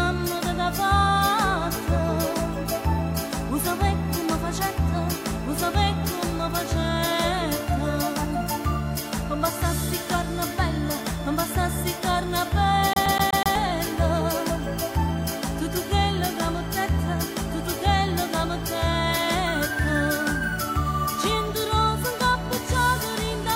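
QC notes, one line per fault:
12.93–13.55 s, CD stuck on one turn: the laser jumps back one track each rotation, so a 124 ms slice repeats five times with brief mutes, an even, rapid stutter.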